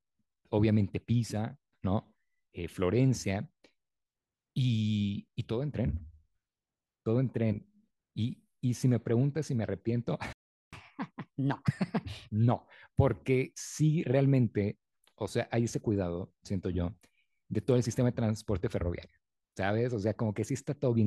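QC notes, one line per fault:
10.33–10.73 s, playback stall: the speech cuts out mid-flow for about 0.4 s, likely because the player ran short of data or its thread was blocked, then resumes.
10.73–12.33 s, catch-up at higher speed: the backlog plays back resampled at 1.25× speed, raising the pitch by roughly four semitones until the lost time is regained and normal speed returns.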